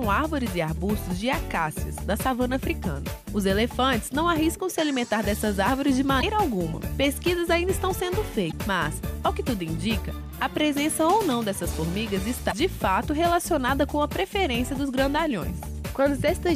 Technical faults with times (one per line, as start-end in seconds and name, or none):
6.18-6.24 damaged data in a compressed stream
8.48-8.53 damaged data in a compressed stream
12.47-12.53 damaged data in a compressed stream